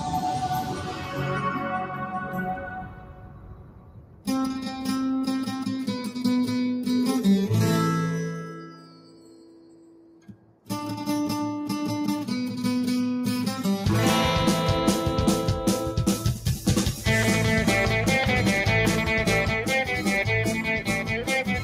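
A noise suppressor applied to music or sounds runs through the whole clip, treating steady tones and tails as noise. Level swings by around 10 dB, so the sound pumps and thins. Unlike a gate, it doesn't snap shut. Attacks pass while sustains sag gradually.

The sound is cut by the noise suppressor at 0.63–1.25 s (about 7 dB), 1.54–4.27 s (about 11 dB), 8.46–10.7 s (about 12 dB), 20.48–21.3 s (about 11 dB) and from 21.47 s to the end (about 8 dB). Held portions sink and decays shorten while onsets stay intact, unlike a dropout, which removes everything.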